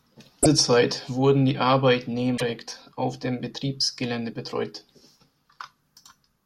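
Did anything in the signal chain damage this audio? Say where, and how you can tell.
Yes. Damaged data in a compressed stream, at the codec stage. Brief disturbances at 0.40–0.46 s and 2.34–2.42 s. Corrupt frames made the decoder misread, then resync.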